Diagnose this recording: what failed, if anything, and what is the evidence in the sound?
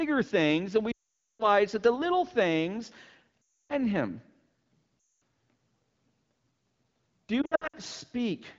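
Lost AMR speech frames on the radio link, a network-stage fault. From 0.92 to 1.45 s about 480 ms of speech drops out, which fits a run of roughly 24 frames. Shorter gaps follow at 3.44 to 3.74 s and 5.16 to 5.20 s. From 7.42 to 7.76 s the losses are scattered, the longest run near 60 ms. Damaged frames failed their checksum. The wideband decoder repeated the last good settings, then faded quickly to silence.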